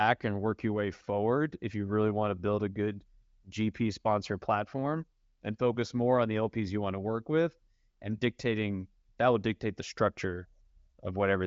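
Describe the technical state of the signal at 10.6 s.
At 10.6 s the speech is intact, carried cleanly through an AMR wideband (HD Voice) codec at 23.05 kbit/s with its band ending at about 7.6 kHz.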